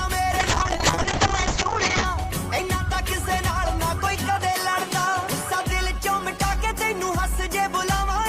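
From 0.41 to 2.11 s, a call bitrate drop makes the sound rough and muffled. The top narrows to about 8 kHz. That points to roughly 6 kbps coding.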